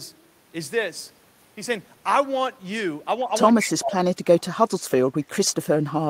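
From 3.52 s to the end, the speech dips deeply, by about 35 dB at worst, likely speech suppressed in double talk as the echo canceller turned down both its own talker and the loudspeaker echo. From 3.60 to 3.67 s, an echo leak appears as a brief delayed copy, 146 ms behind and about 10 dB below the speech, likely residual loudspeaker echo passing the canceller.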